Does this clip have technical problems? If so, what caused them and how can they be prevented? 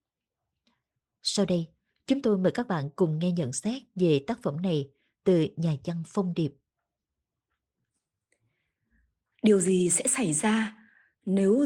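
Yes. There is clock drift between sender and receiver throughout this speech. The sender's clock runs about 4 percent fast. The receiver's jitter buffer keeps overfilling. It must discard small pieces of audio to keep up. Locking both ends to a common clock, or resampling adaptively, prevents this.

The repeated timing corrections run from 0.26 to 11.57 s. Each one trims a short slice, all in the same direction. They come at uneven intervals. The speech runs at 104 percent. Smooth drift compensation by resampling would prevent these cuts.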